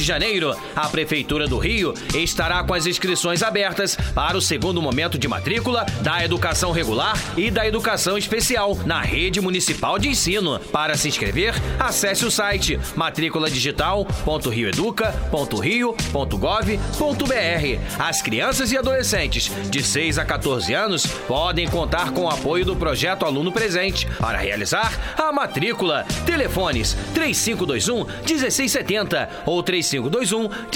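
No technical faults can be heard anywhere in this recording.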